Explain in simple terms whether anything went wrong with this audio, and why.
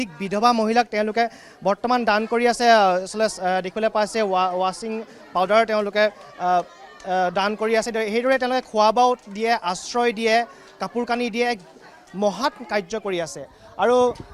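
Nothing went wrong here.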